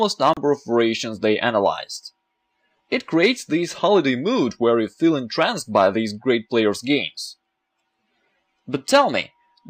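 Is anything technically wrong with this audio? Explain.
Yes, there is a digital broadcast dropout from 0.34 to 0.37 s. For about 32 ms, which fits a single lost frame, the receiver mutes until valid frames return, and the missing audio is gone. It sounds like a brief cut or quick fade to silence. On a spectrogram it appears as a narrow empty vertical band, and on the waveform as a flat gap.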